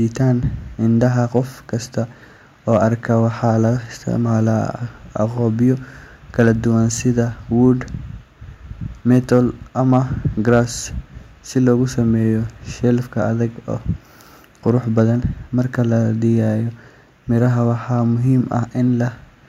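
Speech, with hard clipping in seven short bursts. They fall at 1.03–1.38 s, 2.73–3.50 s, 6.40–6.51 s, 9.11–9.38 s, 9.93–9.97 s, 10.49–10.59 s and 14.68–15.02 s. Each time the level runs past what a stage can pass, by about 1 to 3 dB. The peaks are cut flat. Those flat tops add high harmonics, heard as crackle on the loudest moments. The 3 dB bursts sound harshest.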